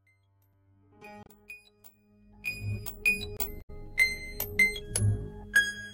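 A music excerpt fading in smoothly from the start to about 3.5 s carries two kinds of fault. A sharp tick at 0.53 s and a short hole from 3.37 to 3.39 s are blocks of digital silence, likely where the output buffer went unfilled and the sound cut out; their lengths, about 6 ms and 23 ms, fit 256- and 1024-sample buffers. Brief glitches from 1.22 to 1.29 s and from 3.58 to 3.70 s come from damaged data in a compressed stream, as the decoder lost frame sync and jumped to the next valid header.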